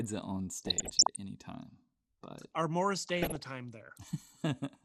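Speech throughout sounds dull and granular, with upper sub-bands flickering, pointing likely to MP2 compression at a low rate around 80 kbps, a steady texture unlike the burst-like errors. DAB burbling appears from 0.58 to 1.16 s, between "it on" and "any time", and again from 2.96 to 3.46 s. Short blips of noise hit single sub-bands, consistent with residual bit errors under one percent. These are short bursts rather than constant coding dullness.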